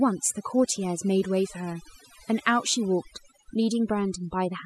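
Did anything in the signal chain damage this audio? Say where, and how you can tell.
Yes, overdone noise removal, present throughout the speech at the processing stage. The background drops to near silence with twinkling specks. Bands near the noise estimate are gated hard, taking quiet speech detail with them.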